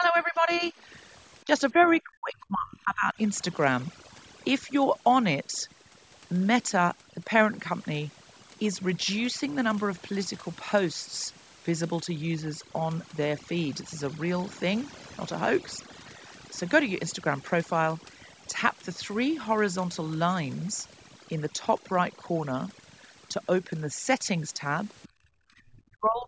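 Speech runs the whole way through with overdone noise removal: the noise reducer is set so hard that the background drops away and breaks up into twinkling specks, as quieter bands of the voice get switched off along with the noise. Up front there's speech suppressed in double talk, most likely because the far end was talking at the same time and the echo canceller pulled the talker down with it. That's a dip of about 10 dB from 0 to 0.74 s, a brief one of about 15 dB at 1.44 to 1.51 s, and a heavier one of about 30 dB from 1.72 to 3.14 s, and the same deep drop comes back from 25.78 s to the end. The other side's voice is leaking through in short scraps at 1.82 to 1.96 s, 25.02 to 25.08 s and 25.77 to 25.82 s. It sits roughly 25 dB under the talker for the first two and about 35 dB under for the last, which points to loudspeaker echo the canceller didn't fully remove. Right after that, from 25.08 to 25.5 s, you get background gated by the echo canceller: the room sound drops by about 22 dB while the loudspeaker plays, then comes back when it lets go. 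The top end stops at 8 kHz, which is just the call's normal microphone processing.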